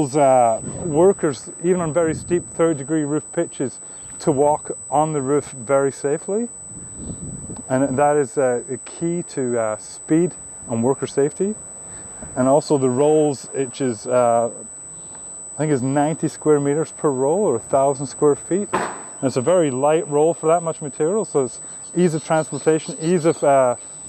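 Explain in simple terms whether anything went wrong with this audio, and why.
There's a USB whine running the whole way through: a thin, steady, high-pitched tone at 8 kHz, sitting fairly loud against the sound. It comes from the USB connection's rapid, regular power draw leaking into the audio through the power or ground wiring.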